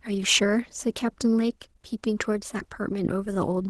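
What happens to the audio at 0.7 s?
Nothing goes wrong at 0.7 s; the speech carries on intact through that moment.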